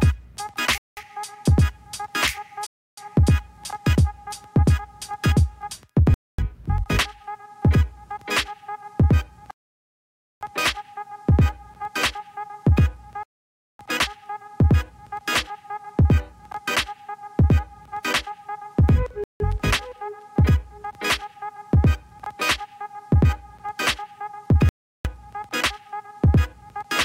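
Bluetooth stall, seven times: 0.78 s (0.19 s), 2.66 s (0.31 s), 6.14 s (0.24 s), 9.51 s (0.9 s), 13.23 s (0.56 s), 19.24 s (0.16 s) and 24.69 s (0.36 s). Each time the audio drops to silence, then resumes. This is likely interference delaying packets so the headphone buffer empties and playback waits for the retransmissions.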